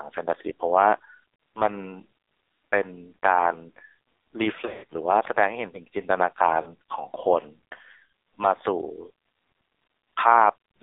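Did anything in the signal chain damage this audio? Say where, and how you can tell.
Yes. At the codec stage, the whole clip has passed through the AMR narrowband mobile codec at a very low rate, and the damage is heavy. The speech sits between about 300 Hz and 3.7 kHz with nothing above, and the voice has the buzzy, synthetic texture of a vocal-tract model driven by sparse pulses. The strongly buzzy, synthetic quality of that texture points to a bitrate near the bottom of the AMR-NB range, around 5.9 kbps.

On the radio and network side, there are lost AMR speech frames in two places. From 4.66 to 4.84 s, about 140 ms of audio is missing, scattered across roughly 200 ms, with the longest gap about 80 ms. There the decoder keeps replaying the last good pitch and vocal-tract settings at falling gain, so the sound smears, sags toward silence, and then returns weak and rough. From 6.62 to 6.74 s, a shorter 40 ms loss, which fits two 20 ms frames, gives a brief dip or warble.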